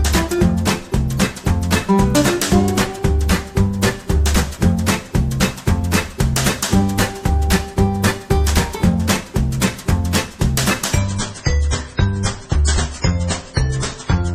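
At 10.98 s the quality drops suddenly, with no gap. It stays low to the end at 14.35 s. This is an adaptive stream at a lower bitrate. The connection slowed, so a leaner version played. Nothing remains above about 10.3 kHz. Codec artefacts thicken, which fits a fall from 128 to 24 kbit/s MP3.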